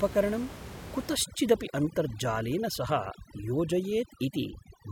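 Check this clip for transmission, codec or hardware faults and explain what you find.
One fault shows up: overdone noise removal from 1.15 s to the end at 4.92 s. The room noise, sitting about 14 dB below the speech, gets caught in it. A noise reduction stage set too strong is shutting off individual frequency bands whenever they come near its noise estimate, taking the quieter parts of the speech with them. The background drops and breaks up into twinkling specks. Unlike codec artefacts, it tracks the noise floor.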